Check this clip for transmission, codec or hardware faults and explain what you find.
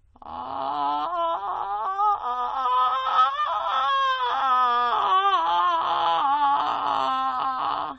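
One codec fault is present. AAC compression runs throughout the music: nothing sounds above 8.8 kHz, and the coding damage is plainly audible. This is likely AAC-LC at a low bitrate, around 32 kbps, where the encoder lowers its cut-off to save bits, leaving the top end dull.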